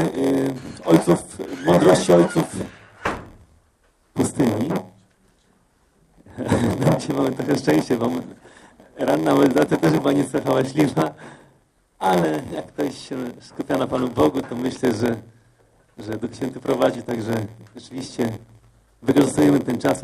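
The audio carries a block size mismatch (padded) for its full length. A steady buzz at about 86.1 Hz sits under the whole sound, and playback runs slow at 0.938 times normal speed while the pitch stays about where it should be. The buzz rate fits a downstream stage reading 512-sample blocks while the stage feeding it writes shorter ones. Each block's unfilled tail is zero-padded, producing a brief gap per block that both chops the audio into a buzz and stretches its duration.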